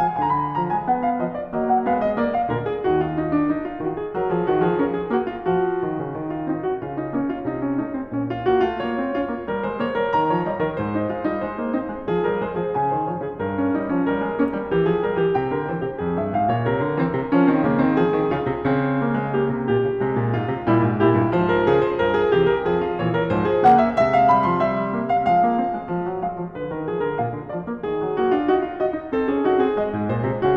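Hard clipping at 23.66 to 23.75 s and again at 24.31 s: music peaks overdriven by about 3 dB, then about 1 dB, are cut flat, adding crackle.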